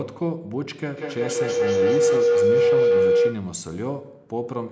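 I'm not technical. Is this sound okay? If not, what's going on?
No. From 0.97 to 3.65 s there is feedback howl: two devices in the same room are on the call, so sound loops from loudspeaker to microphone and grows louder each trip. It becomes a mid-pitched tone around 500 Hz, with the sound going round the loop about five times a second.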